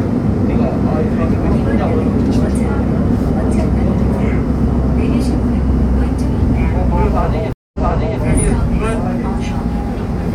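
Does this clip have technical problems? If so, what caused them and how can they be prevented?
Yes. At 7.53 to 8.20 s there is a stream reconnect: the connection dropped, leaving a 212 ms gap, and a new decoder rejoined mid-stream, repeating material from 464 ms earlier. A waveform shows a flat gap followed by a duplicated stretch. Prevent it with a larger network buffer and seamless resume that picks up at the exact byte offset.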